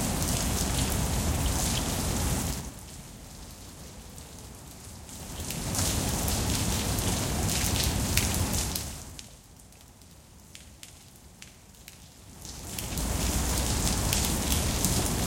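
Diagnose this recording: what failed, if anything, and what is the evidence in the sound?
From 2.42 to 2.79 s the sound drops by roughly 15 dB, and the fade carries a zipping tick, a small click at each step. This is zipper noise from a gain stage in the processing or playback chain. The level moves in 4 dB jumps about ten times a second instead of ramping, which points to a gain value updated once per block with no smoothing between blocks. Each abrupt jump breaks the waveform and produces one of the clicks.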